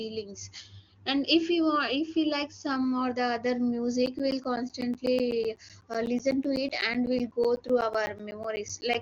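Periodic USB or driver dropouts run from 4.06 s, just after "the other", to 8.95 s: every 0.125 s something stalls the audio path and roughly 10 ms of speech becomes silence, giving a steady ticking, about forty clicks, through the AMR-WB band-limited audio.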